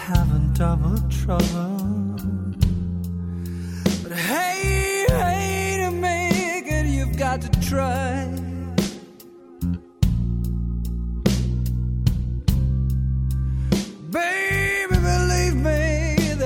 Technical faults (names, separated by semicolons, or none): none